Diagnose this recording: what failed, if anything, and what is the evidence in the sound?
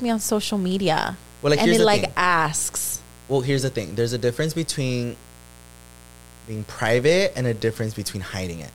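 A mains buzz sits under the speech for the whole recording, a steady raspy tone well below the voice, roughly 25 dB down. Its fundamental is 60 Hz, with a dense comb of harmonics running up into the kilohertz range, which gives it that edge rather than a smooth hum. The failure is in the analogue wiring: a dimmer, rectifier or poorly shielded cable is coupling sharp switching spikes, twice per mains cycle, into the signal path before conversion.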